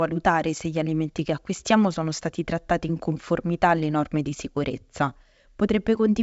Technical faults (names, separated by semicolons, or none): none